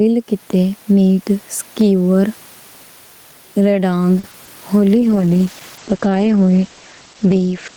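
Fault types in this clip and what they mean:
Gain pumping: Throughout the clip loud and soft parts are pulled closer in level, with a level swing of around 10 dB, leaving the sound squashed together. The likely cause is microphone gain set far too high, with a fast limiter or compressor clamping down on every peak.
Short stall from a late packet: Between 4.19 and 4.25 s one sound is held about 40 ms too long before the audio resumes where it left off. A packet arrived late, the jitter buffer ran dry, and the receiver stretched the last sound to wait, losing nothing.
Short concealed packet loss: Just after the stall, at 4.31 and 4.45 s, come two brief smears, each about 20 ms long, where the real audio is replaced. Those packets never reached the decoder in time, so the receiver extended the preceding sound to fill each gap, then blended back.
Call bitrate drop: From 4.97 s to the end the speech turns rough, watery or muffled, with the top end cut from 20 kHz to about 8 kHz. 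The bandwidth estimate fell and the encoder went from 32 to 11 kbps, staying at the lowest rate for about 2.3 s.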